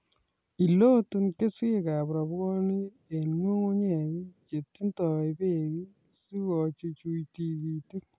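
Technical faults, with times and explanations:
Nothing technical to flag here: the speech comes through without any dropouts, glitches or other problems worth pointing out.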